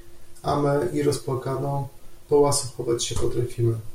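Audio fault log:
2.15 s, dropped samples: a couple of samples likely went missing from the stream, a tiny fraction of a millisecond, so the waveform leaps straight to a later value. Far too brief to remove any speech, the jump sounds as one sharp click.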